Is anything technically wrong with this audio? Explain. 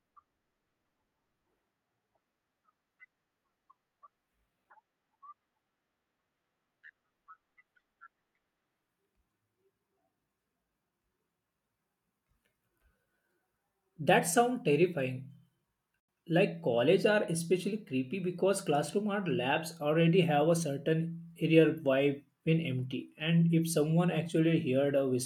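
Yes. At 16.0 s the speech drops into a block of digital silence lasting about 85 ms, likely from an unfilled output buffer, which fits a 4096-sample buffer. Abrupt cuts at both edges and silence, not a fade or smoothed gap, set it apart.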